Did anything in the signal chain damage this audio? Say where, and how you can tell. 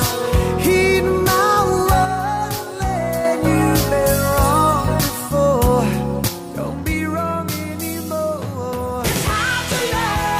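Yes. The sound falls abruptly by about 6 dB from 2.05 to 3.25 s, then again from 6.28 s to the end. This is one channel dropping out, likely from a faulty stereo cable or connector. With one side gone, the mono sum halves.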